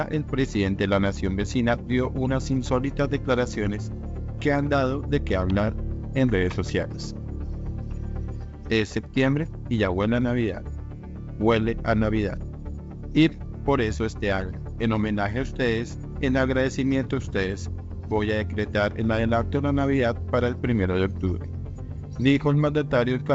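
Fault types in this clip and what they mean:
No faults can be heard.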